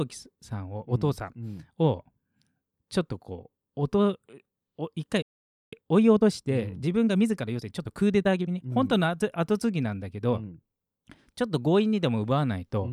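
At 5.22 s the speech stops dead in mid-flow and stays silent until 5.73 s, about half a second. This playback stall was likely caused by the player running short of buffered data or its output thread being blocked.

From 5.73 s to 8.73 s the speech runs at about 1.15 times normal speed as the player works off the backlog the stall created. This time-compressed catch-up removes small slices and cross-fades across the joins, so the delivery sounds rushed. Unlike a simple faster playback rate, the pitch stays where it was, with no chipmunk rise, and normal pacing returns once the backlog clears.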